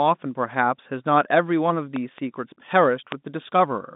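At 1.96 to 2.20 s a loud pop arrives as a quick pair of thumps, slightly above the speech, likely a voltage glitch such as a switch or static discharge. At 3.12 to 3.14 s a single pop stands roughly 20 dB over the signal. Each appears as a sharp spike on the waveform and a thin full-height vertical line on the spectrogram.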